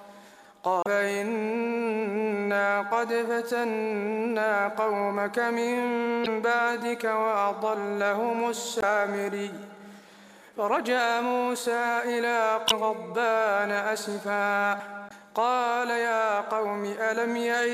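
At 0.83, 6.23, 8.79, 12.66 and 15.07 s, damaged data in a compressed stream throws the decoder out of sync, causing 40–60 ms blips that appear as brief broadband smears on a spectrogram.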